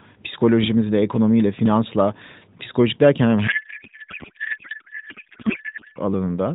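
A speech clip carried over AMR narrowband, band-limited below 4 kHz, with only light codec coloration at a rate that fits 12.2 kbps. From 3.48 s to 5.99 s the speech is replaced by garbled noise and warble that barely tracks it. This is a codec payload misread. The sender packed the frames octet-aligned, but the receiver unpacked them as bandwidth-efficient. Every field lands in the wrong place. The decoder still builds plausible frames, so it synthesises nonsense until the formats agree again.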